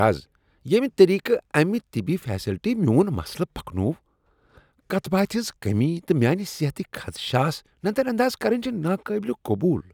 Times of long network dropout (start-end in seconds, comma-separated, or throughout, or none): none